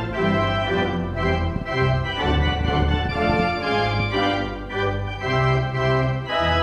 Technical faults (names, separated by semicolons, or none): train of clicks